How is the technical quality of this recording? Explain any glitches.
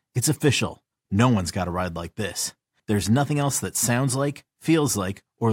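No glitches or dropouts heard.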